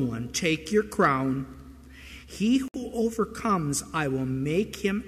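The audio breaks with a gap at a join of encoded pieces, a 61 ms silence from 2.68 to 2.74 s, after which the sound resumes where it stopped. Joins recur every 4 s, which suggests the audio was encoded in separate chunks and spliced without trimming each run's start delay and end padding. On a waveform it appears as a flat notch with smeared edges, and on a spectrogram as a narrow vertical blank band across all frequencies.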